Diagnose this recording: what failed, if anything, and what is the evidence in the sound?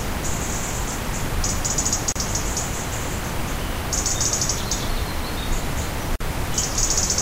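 The failure is at the codec stage, where separately encoded pieces were joined: a gap at a join of encoded pieces. The continuous sound drops out for about 33 ms at 2.12 to 2.16 s and for 49 ms at 6.16 to 6.21 s. These gaps fall 4 s apart, which points to 4 s segments. Each piece keeps its encoder start-up delay and final-frame padding, so silence sits between pieces with smeared edges before the sound resumes where it stopped.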